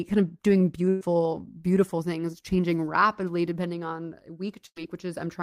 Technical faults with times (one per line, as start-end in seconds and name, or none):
0.89-1.03 burst of packet loss
4.67-4.78 burst of packet loss